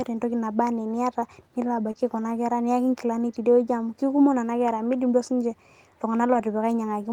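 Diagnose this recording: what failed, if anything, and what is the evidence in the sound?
The failure is at the network stage: short concealed packet loss. At 1.91 to 1.97 s, just before "kuna kera", and again at 6.33 to 6.37 s, about 20 ms of speech never reached the decoder and was synthesised by extending the preceding sound, heard as a brief smear or wobble. The first gap adds roughly 10 ms of timing stretch. On a spectrogram, look for frozen harmonics or a noise smudge; the waveform shows repeated cycles blending back.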